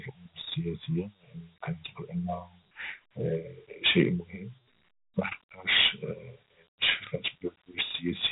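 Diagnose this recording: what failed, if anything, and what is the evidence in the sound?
The codec stage is where this one went wrong: the speech has been through Dialogic VOX ADPCM, and the damage is plainly audible for the whole clip. Nothing survives above about 3.8 kHz, so it has that narrow phone-line quality, and a gritty hiss rides along with every syllable. That's the 4-bit adaptive step size hunting after the waveform and never quite landing, with its error tracking the speech level. The damage fits a 32 kbps stream.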